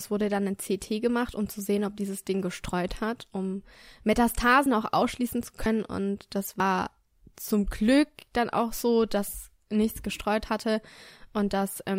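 Sudden jumps forward in the speech come at 4.66 s, just before "auch ausschließen zu", at 5.66 s right after it, and at 6.60 s, skipping roughly 20, 70 and 40 ms. These are likely dropped buffers (overrun): samples overwritten before being read, leaving the edges spliced directly together.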